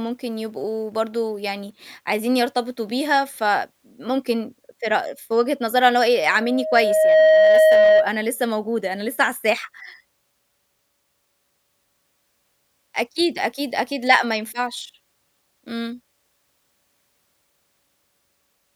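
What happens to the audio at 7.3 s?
At 7.3 s the clip is in the middle of a loudspeaker feedback squeal. It runs from 6.12 s to 8.13 s. A microphone is picking up the loudspeaker it feeds. At 629 Hz the loop gain passes one, so that tone keeps reinforcing itself. It swells over about a second into a steady squeal. At its peak it sits roughly 10 dB above the speech, and 7.3 s falls within that loud stretch.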